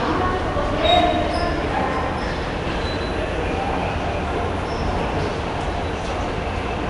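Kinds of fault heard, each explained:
Nellymoser compression: a rough, hissy halo and smeared, watery texture throughout, likely from Flash's Nellymoser Asao codec, which fits about 44 kbps and fills starved bands with noise. A spectrogram shows blotchy noise patches and nothing above 10.6 kHz.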